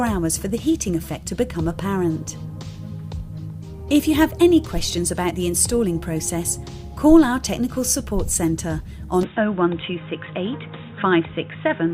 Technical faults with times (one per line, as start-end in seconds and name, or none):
5.30 short concealed packet loss
9.23-11.94 input switched to a poorer device